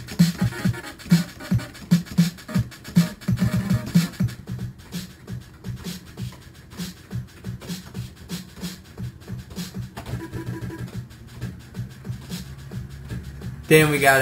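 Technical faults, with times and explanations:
Throughout, imaging from sample-and-hold upsampling: a bright metallic fizz tracks the sound's level, about 18 dB below it, spanning 6 to 12 kHz. Samples were repeated without smoothing, mirroring the spectrum upward, which fits a 12 kHz original rate.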